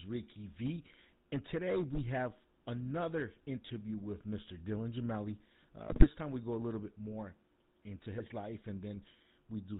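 The speech runs through the GSM full-rate codec for its whole length. A vocal-tract model is excited by sparse regular pulses, which fits the 13 kbit/s full-rate scheme, and nothing above 4 kHz survives. The result is a dull, band-limited voice with a constant buzzy, gravelly roughness.

From 1.33 to 2.27 s, hard clipping occurs. The signal overdrives a stage by about 9 dB, so its peaks are sliced flat. Those squared-off tops generate high harmonics, and every loud syllable in that stretch takes on a harsh, crackling fuzz.

GSM bit errors appear from 5.88 to 6.09 s and again from 8.15 to 8.29 s. Corrupted bits reach the speech decoder and scramble its filter, pitch and gain values across what sounds like a short run of frames. The voice breaks into squawks, pops and gargling, more violently in the first burst.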